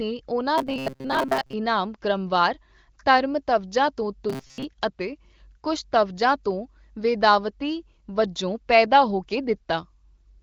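From 0.58 to 1.53 s and again from 4.30 to 4.64 s, audio likely arrived too seldom, so roughly 7.5 ms fragments were looped in place of most of the real signal. This robotic sound from repeated short buffers turns the speech into a rigid metallic buzz at 133 Hz. The AMR wideband (HD Voice) codec path limits the band to about 7 kHz.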